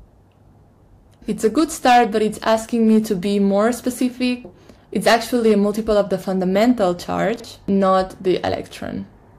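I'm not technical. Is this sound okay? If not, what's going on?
No. Hard clipping happens four times: from 1.45 to 2.03 s, 2.47 to 2.98 s, 5.07 to 5.52 s, and 6.61 to 6.83 s. The sound was louder than the recording chain could handle, so the tops of its loudest waves were sliced off flat. Those flat edges add crackle on the peaks, turning into a harsh, gritty fuzz where the overload is large. It is worst around 5.07 to 5.52 s, where the overload was heaviest, and milder in the 2.47 s and 6.61 s stretches.

There are also chunks out of order between 7.36 and 7.44 s. The audio is handled in small slices about 40 milliseconds long, and one slice arrived a step late, so it plays after the slice that should have come after it. Nothing is missing, but that brief moment sounds jumbled.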